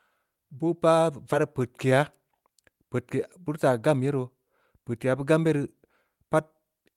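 At 1.33 to 1.35 s the speech jumps abruptly forward, losing about a second with no gap: a skip ahead, where queued audio was dropped. From 1.91 to 2.74 s, just before "peudke beurii", speech runs about 6% fast at unchanged pitch, a jitter buffer speed-up trimming pitch periods to shed roughly 50 ms.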